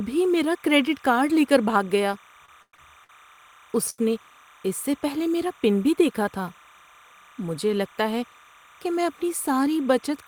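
Speech runs through the whole 10-second clip with a faint chirping warble behind it. That is timecode bleed. Linear timecode from a nearby track or cable has leaked into the audio path. The code is a square wave that flips between two pitches, here near 1 kHz and 2 kHz. Its rhythm fits code running at 29.97 frames per second. It sits roughly 30 dB below the speech, so it is quiet but constant.

From 2.45 s to 3.11 s the speech drags and stutters. This is repeated stalls, or stutter. Packets arrived too late, again and again, and the jitter buffer kept running dry. Each time, the receiver held the last sound until data came. There are four such holds, about 217 ms in total, the longest about 110 ms. That is a third of the span. Nothing is lost, but the timing is stretched.

At 3.90 s to 4.00 s there is a short stall from a late packet. One packet missed its slot as the delay jumped by 84 ms. 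The receiver stretched the sound for those 84 ms, then carried on from the same point. No speech is dropped. One sound simply lasts too long, with a slight buzz or dip.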